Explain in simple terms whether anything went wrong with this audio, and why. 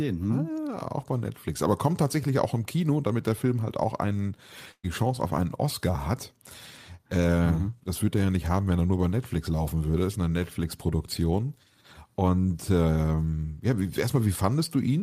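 A burst of packet loss hits at 4.71 to 4.85 s. Several chunks of the speech arrived too late or never arrived, so the player stretched the last sound and let it fade away. About 120 ms of speech is skipped, and the talking resumes further on.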